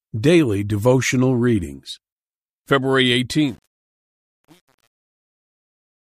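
A speech recording fades out over its last few seconds, from about 3.3 s to 6.04 s. From 3.33 s onward it suffers truncation distortion on a fade. The fading level is being cut to too few bits without dither, which fits an 8-bit stage. As the signal sinks toward the smallest step, the waveform turns blocky. From 3.55 s to the end, the tail sounds gritty.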